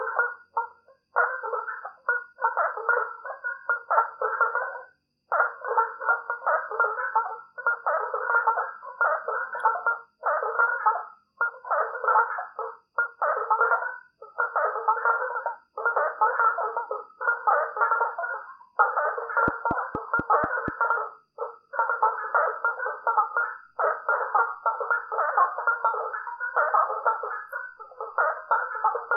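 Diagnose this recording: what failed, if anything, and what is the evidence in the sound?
A train of clicks points to the analogue wiring or the interface, most likely interference from nearby equipment coupling a repeating pulse into the signal path. From 19.48 to 20.69 s, about seven near-identical clicks tick at a regular 4.2 per second, peaking roughly 15 dB above the surrounding sound. Because the pulses come from outside the audio rather than from it, they sit on top of the sound as an evenly paced popping.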